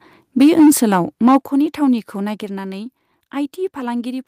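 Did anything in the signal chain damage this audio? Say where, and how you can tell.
Yes. Microphone overload at 0.40–0.71 s and 1.27–1.37 s: flattened, crackly peaks, about 5 dB then 3 dB over, likely input gain driving the converter past full scale.

Then the microphone volume is stepped down at 1.41 s by about 7 dB and at 2.43 s by about 4 dB, likely call processing cutting device input gain.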